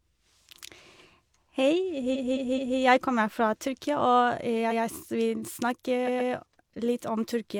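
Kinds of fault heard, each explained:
Repeated frames: a short run of coded speech is decoded more than once, heard as a stutter. A 213 ms block replays three extra times from 2.11 s, and 128 ms blocks replay from 4.67 and 6.04 s. On a waveform or spectrogram, identical patterns sit side by side with abrupt joins.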